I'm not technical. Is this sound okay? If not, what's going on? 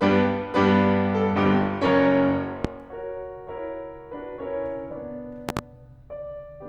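No. The music briefly hiccups at 1.86, 3.58 and 4.91 seconds, skipping tiny slivers of sound. These are compressed frames skipped: small chunks of the file went missing or were rejected as damaged.

There is also a loud pop, a sharp pop from about 2.65 to 2.69 seconds and a double pop from 5.49 to 5.61 seconds, likely caused by an electrical jolt such as a plug or switch.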